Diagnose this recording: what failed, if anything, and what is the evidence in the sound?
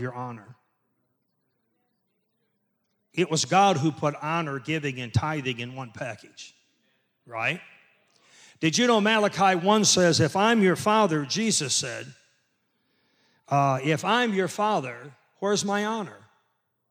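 Nothing failed here: listening across the whole recording, no stage of the chain leaves a mark on the speech that a diagnosis could point to.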